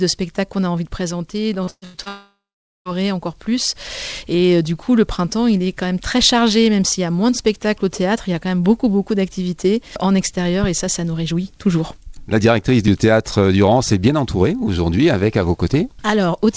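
From 1.64 to 2.08 s the sound turns choppy, breaking up four times in quick succession, with the longest break about 116 ms. This is repeated packet loss with a robotic sound: audio packets failed to arrive again and again, and each hole was bridged by stretching the last sound received. Across this span roughly 60% of what is heard is that patched-in continuation rather than the actual signal.

Straight after, from 2.08 to 2.88 s, the last sound smears on as a fading buzz or hiss and then gives way to near silence lasting about 460 ms before the audio resumes further along, with roughly 780 ms of material gone. This is most likely a long network dropout: nothing reached the receiver for that stretch, so the gap was first covered by continuing the previous sound and then simply left empty. Throughout, the G.722 call codec limits the audio to nothing above 8 kHz.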